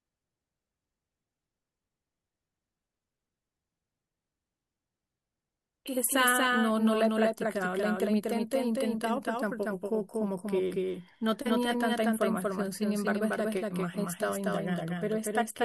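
A speech recording in which every syllable is heard twice: a second, equally loud copy trails the first by about a fifth of a second throughout the clip, giving a stuttering, slapback doubling. The trailing copy is full-band and dry, with no decay or room tone. This doubled audio track is likely the same signal captured again through a slower path and mixed back in.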